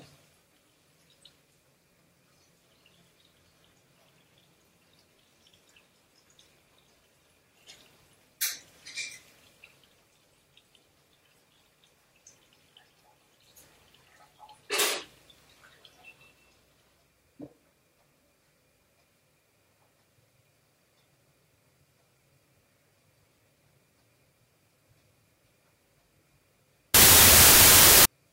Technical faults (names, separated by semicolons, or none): wrong sample width